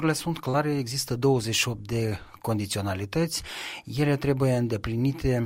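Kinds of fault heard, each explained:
Short concealed packet loss: about 40 ms at 0.49–0.54 s and 10 ms at 2.09–2.11 s never arrived, so the receiver extended the preceding sound to fill them, causing a brief smear. Spectrograms show smoothed, repeated partials; waveforms show an unnaturally regular stretch.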